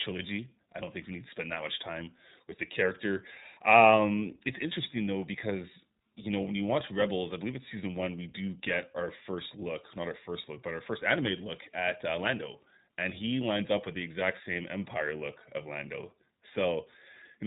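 Throughout, the speech carries iLBC codec damage: nothing above 4 kHz on a spectrogram, and a rough, synthetic texture from coding each 30 ms frame independently, fitting roughly 13 kbps.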